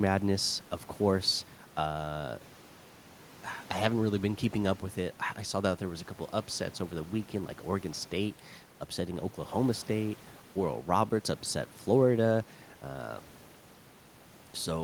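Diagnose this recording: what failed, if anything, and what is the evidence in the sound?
Nothing stood out on listening to this speech recording, and the only background is the room's own noise, sitting about 26 dB below the speech.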